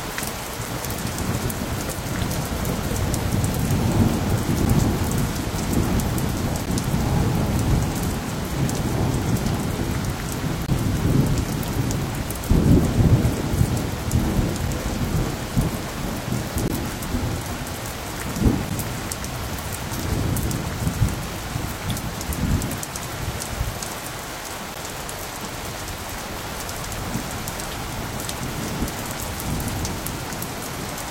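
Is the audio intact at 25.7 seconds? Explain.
Yes, the audio at 25.7 seconds is intact, with no dropout, click, distortion or other fault at that moment.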